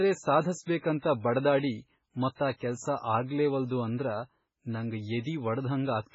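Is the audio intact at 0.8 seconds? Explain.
No. From 0.78 to 0.83 s there is pre-echo. It is a brief hiss, about 47 ms long, that arrives before a sharp attack. The coder spreads its noise across a whole block, so noise meant for the loud onset fills the quiet moment first. The attack sounds smeared.

The whole clip, including this moment, sounds watery and swirly, with nothing above 7.7 kHz. The likely cause is heavy MP3 compression. The damage fits a very low bitrate, around 16 kbps. Weak frequency lines flicker on and off between frames.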